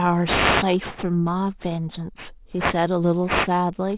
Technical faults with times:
0.00-3.98 aliasing

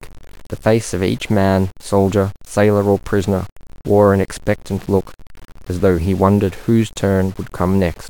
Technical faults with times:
0.00-8.09 low bit depth without dither

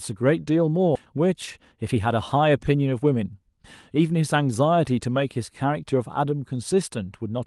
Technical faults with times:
0.95-1.06 skip ahead
1.50-2.07 jitter buffer speed-up
2.92-3.65 jitter buffer speed-up

